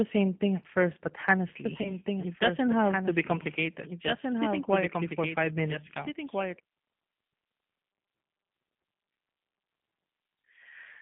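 Throughout, the speech carries G.729 codec damage: nothing passes above about 3.4 kHz or below 150 Hz, and the voice sounds plainly rough and synthetic. The reason is that it is rebuilt from a filter, a pitch predictor and sparse pulses, consistent with an 8 kbit/s G.729A stream rather than simple band-limiting.

From 1.65 s to 6.59 s a doubled audio track runs under the speech. A full-band second copy trails roughly one and a half seconds behind, about 5 dB quieter. It likely comes from a slower capture path mixing the same audio in again. Unlike a room echo it has no decay or reverberant colour, and it appears and vanishes abruptly.

From 1.82 s to 1.93 s there is VoIP packet loss concealed by the speech codec. About 30 ms of audio, which fits one lost packet, is replaced by a stretched extrapolation of the last pitch that fades. Because each frame builds on the previous one, the voice stays weak or distorted for tens of milliseconds past the gap itself. 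A plain dropout would instead go silent or click.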